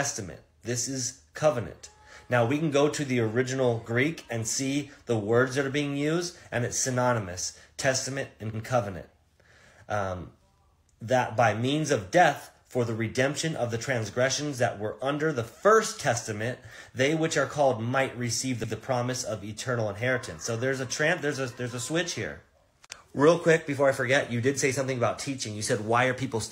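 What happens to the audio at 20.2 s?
At 20.2 s the audio plays through cleanly, with no dropout, glitch or other fault at that moment.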